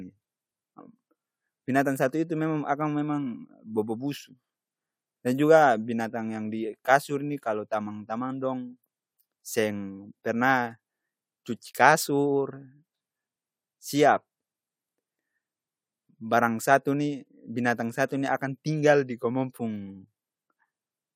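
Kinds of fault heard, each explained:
No kinds of fault are heard in this clip.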